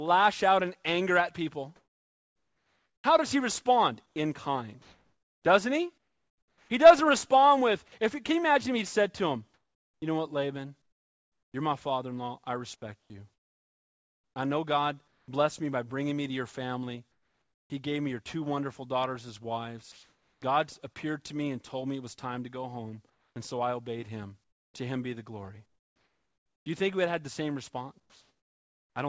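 Right after "in anger at people" the background goes flat: from 1.76 to 6.70 s the room's real texture is swapped for a steady, featureless hiss. That's comfort noise in place of the background, likely because the sender's voice detector stopped transmitting during pauses and the receiver filled the gap with synthetic noise. It happens again at 9.54 to 11.54 s, 13.00 to 15.28 s, 17.12 to 17.70 s (about 7 dB quieter than the real background), 19.92 to 20.42 s (about 4 dB louder), 23.10 to 26.66 s (between "time to go home" and "you think we had"), and 28.00 to 28.96 s after "had had the same" (about 3 dB down). Each time, the detail drops out and a smooth noise bed sits there in its place.

At 17.68 s the sound comes back in abruptly, with no soft lead-in. That's an onset clipped by the voice detector. The detector was likely slow to notice the sound starting again, so roughly 20 ms of the beginning was never sent and comfort noise covered it. 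You hear a hard, chopped attack. The call path stays in its normal range, with nothing above 8 kHz, which fits G.722.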